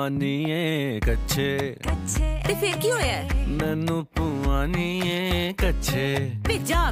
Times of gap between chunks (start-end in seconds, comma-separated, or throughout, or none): none